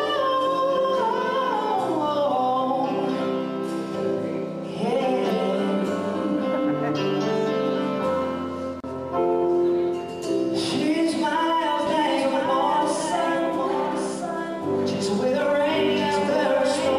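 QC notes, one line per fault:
11.87 s to end, doubled audio track: likely a second capture path or out-of-step edit mixing in another copy about a second late, so every sound repeats, full-band and about 5 dB quieter, with no decay or room colour, starting abruptly.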